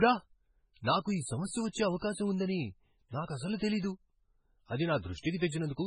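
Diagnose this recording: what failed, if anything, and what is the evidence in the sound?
The codec stage is the likely culprit: heavy MP3 compression at a very low bitrate, consistent with roughly 16 kbps. The speech has nothing above 10.5 kHz, where the encoder cut the treble to save bits. Weak frequency lines drop in and out between frames, so the sound turns watery and swirly throughout, with metallic chirps on sibilants and soft, smeared consonant onsets. The damage is heavy across the whole clip.

Pre-echo, also from the codec, appears twice. Short hiss runs ahead of an attack from 1.69 to 1.74 s, spreading about 53 ms, and again from 1.99 to 2.02 s, about 32 ms, just before "ఉందని నాకసలు". In each case a sharp onset landed late in a transform block. Quantisation noise sized for the loud part was spread across the whole block, so it fills the quiet gap before the attack and blunts it.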